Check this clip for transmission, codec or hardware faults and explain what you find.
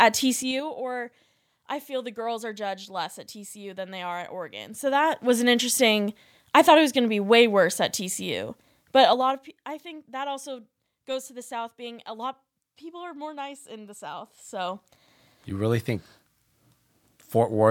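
Zipper noise appears four times in this speech, each time the level moves. From 0.34 to 0.68 s, before "or I feel the", the level drops by roughly 15 dB in 3 dB steps. From 4.52 to 5.38 s, between "than they are at" and "an interesting I thought", it rises in 1 dB steps. From 8.96 to 9.56 s, before "I think that also", it falls in 2 dB steps. From 14.17 to 15.28 s, it rises in 1 dB steps. Each gain jump lands unsmoothed, around ten times a second, so a ticking rides on the voice. A smooth fader move would sound as a clean, seamless swell instead.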